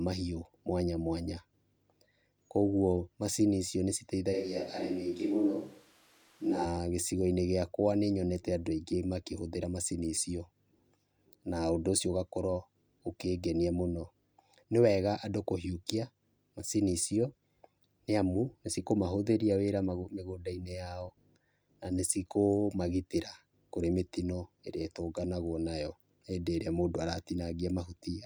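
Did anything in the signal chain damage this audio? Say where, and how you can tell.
Yes. From 4.35 to 6.64 s the speech abruptly turns roomy and hollow, with thinner bass and room noise around 30 dB below it, then snaps back. It is likely a switch to a distant microphone at capture, not added reverb, since the background rises with it while the level stays about the same.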